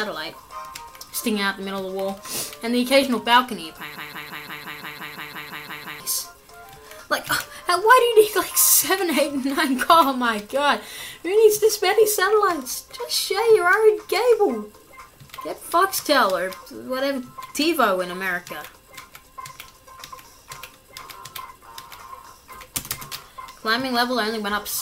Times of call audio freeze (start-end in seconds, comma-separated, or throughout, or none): none